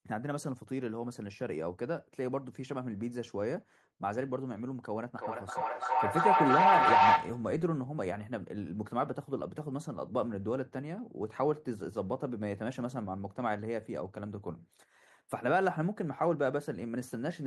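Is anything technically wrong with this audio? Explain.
Yes. From 5.17 to 7.59 s there is a feedback howl: sound from a loudspeaker re-enters a microphone and gains level each pass, building a tone around 1 kHz that pulses roughly every 300 ms and peaks about 9 dB above the speech.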